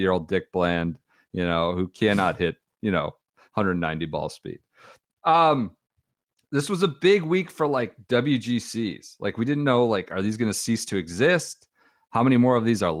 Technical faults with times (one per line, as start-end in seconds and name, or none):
none